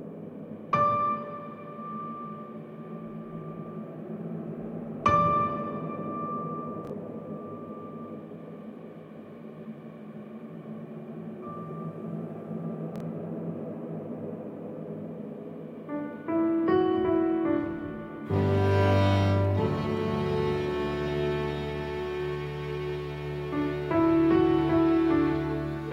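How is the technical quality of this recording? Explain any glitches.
Two brief glitches mar the recording. At 6.85 to 6.90 s and 12.96 to 13.00 s, chunks arrive out of order: one block of about 23 ms plays one chunk late, producing a jumbled blip.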